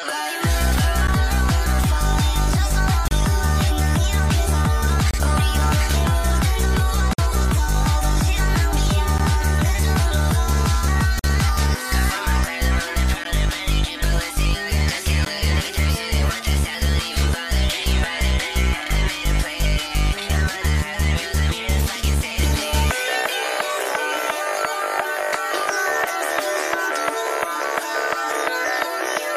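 Gaps between stream segments cut hard-edged silences of 12 to 52 ms into the sound at 1.07, 3.08, 5.11, 7.13, 9.18, 11.19, 13.24 and 15.25 s, every 2 s at segment boundaries where timestamps misalign. Waveform shows flat dropouts; spectrogram shows thin vertical blank stripes.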